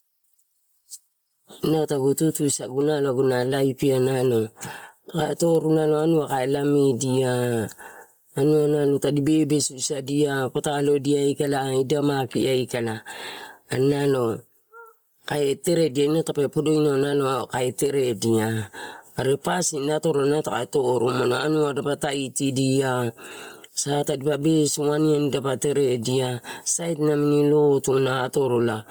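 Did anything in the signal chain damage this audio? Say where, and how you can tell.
Yes. At the call-processing stage, gain pumping runs through the whole clip, likely from input gain set far too high with a fast limiter clamping down on each loud syllable. The gain swings by around 15 dB, squashing the dynamics.

At the codec stage, heavy Bluetooth LC3 compression is audible throughout, likely from an LE Audio link. The upper spectrum is sparse and noise-filled, giving the speech a breathy, grainy edge, which fits a low bitrate near 32 kbps with 10 ms frames. Content reaches up to 20.1 kHz.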